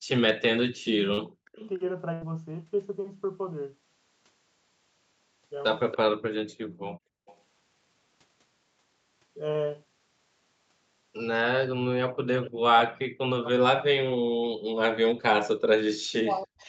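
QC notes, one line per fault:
1.03–1.62 s, speech suppressed in double talk: the voice sinks by roughly 40 dB for about half a second, likely the echo canceller ducking it while the other side spoke. Unlike packet loss, it is a level dip, not a smear.
1.13 s, short concealed packet loss: a 40 ms hole is filled by extending the preceding sound, heard as a brief smear or wobble rather than a level drop.
2.13–2.23 s, burst of packet loss: 80 ms goes missing, bridged by a held, fading continuation of the last sound. It is longer than the loss at 1.13 s, and audio resumes further along.
5.92–5.97 s, echo leak: a faint copy of the voice returns about 286 ms late at about 15 dB below the speech. This is likely residual loudspeaker echo, a distinct delayed repeat rather than reverberation.
6.66–7.26 s, background gated by the echo canceller: the room sound drops by about 40 dB for about half a second, then returns. 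Only the background dips, not the voice.
7.26–7.38 s, echo leak: another delayed copy, again 286 ms behind and much quieter at about 30 dB below the speech, likely residual loudspeaker echo.
12.18–16.68 s, speech suppressed in double talk: from here to the end the voice is repeatedly pushed down by roughly 40 dB, likely from overlapping talk.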